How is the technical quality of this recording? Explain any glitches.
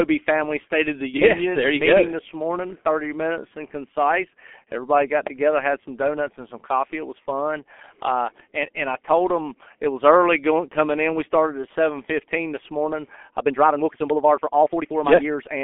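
Quality's pretty poor, honestly: the whole recording has been through a very low-rate phone codec, and the last couple of seconds have been sped up.

G.723.1 codec: from start to finish the speech sounds boxed-in and muffled. It sits in a narrow telephone band, roughly 250 Hz to 3.5 kHz, with nothing at all above 4 kHz. The damage is heavy. The sound points to a codec running around 6.3 kbit/s on 30 ms frames, and its voice model can't follow fast changes at that rate. So consonants smear together, and the voice picks up that hoarse edge.

Time-stretched section: right after "seven fifteen this morning", at 13.39 s, the pace suddenly jumps to about 1.71 times normal and stays there through to the end, while the pitch doesn't rise at all. That's most likely software squeezing the audio to fit a set length, chopping out short slices to keep the pitch steady. You can hear it: the sound turns rushed.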